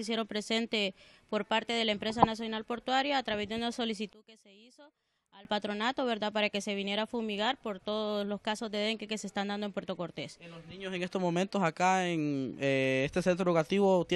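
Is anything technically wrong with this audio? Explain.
Yes, one spot. From 4.13 to 5.45 s the sound drops by about 25 dB to a faint copy. It's likely one channel inverted, so the shared centre cancels out in mono.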